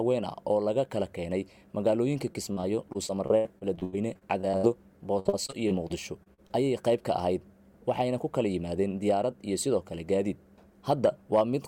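Packets were lost or arrived late again and again from 2.33 to 4.65 s, and again from 5.19 to 6.52 s. This is repeated packet loss, heard as a robotic sound. Each hole is filled by stretching the last good sound, covering about a fifth of the first stretch (longest gap 88 ms) and slightly less of the second (longest 57 ms). The audio turns choppy, with short pieces missing.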